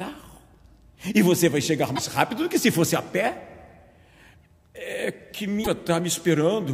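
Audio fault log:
1.92–1.99 s and 5.61–5.68 s: damaged data in a compressed stream, 70 ms each. Corrupt frames broke decoder sync, showing as abrupt discontinuities in waveform and spectrogram.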